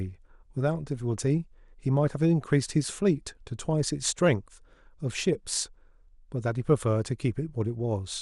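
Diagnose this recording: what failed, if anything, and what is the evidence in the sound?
The codec stage is the likely culprit: MP2 compression, consistent with a low bitrate around 80 kbps, starves its 32 sub-bands of bits. Upper bands switch off and flicker, leaving the speech dull, with a gurgling, granular roughness throughout.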